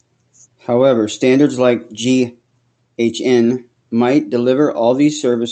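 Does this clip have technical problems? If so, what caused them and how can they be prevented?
No, no technical faults here.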